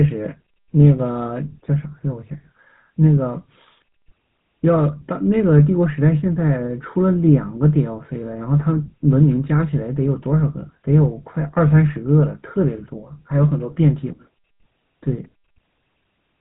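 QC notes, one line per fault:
Throughout: GSM full-rate codec. The speech has a buzzy, gravelly roughness, and nothing comes through above 4 kHz. The codec rebuilds the voice from a vocal-tract model driven by sparse regular pulses, which fits a 13 kbps full-rate link. The damage is plainly audible.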